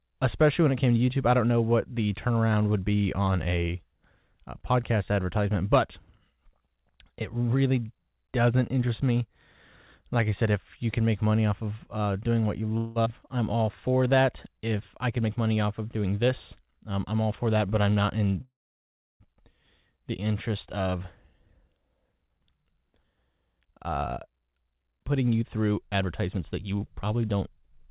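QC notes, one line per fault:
12.77 to 12.98 s, call audio freeze: just after "uh doing what you" the sound stops and the last fragment is stretched out as a short fading buzz for about 0.18 s. The most likely cause is a brief hold-up of packets that left the jitter buffer empty. Playback then resumes where it left off, so nothing is lost.
13.04 s, skip ahead: a piece of the speech roughly a tenth of a second long is gone and the two sides meet almost directly. Part of the delay built up by the freeze is dropped in one step.
13.52 to 14.76 s, jitter buffer slow-down: the speech runs at 92% speed with its pitch unchanged. Single pitch periods are repeated again and again to build up a reserve, which adds 100 ms and draws out the sounds.
15.08 to 16.67 s and 20.77 to 27.88 s, jitter buffer speed-up: the speech runs at 110% speed with its pitch unchanged and sounds hurried. Pieces one or a few pitch periods long are cut out to reduce the delay. 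About 150 ms is removed before "um I'm all for", and about 0.7 s from "the interest" onward.
18.41 to 19.23 s, call audio freeze: the speech is held for about 0.79 s. A brief fading tail gives way to roughly 0.68 s of silence, and then the speech resumes with nothing missing. The most likely cause is a long stall in packet delivery that left the jitter buffer empty.
Throughout, the audio is carried over a G.711 mu-law call path, which fits a 64 kbps stream. There is nothing above 4 kHz, which gives the usual narrowband telephone sound.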